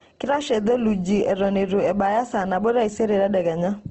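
A speech recording, grainy and rough throughout, with plainly audible codec damage and nothing above 8.1 kHz, which fits a low bitrate near 16 kbps and likely Opus compression. A spectrogram shows a flat cutoff at 8.1 kHz and noisy, smeared harmonics instead of clean bands.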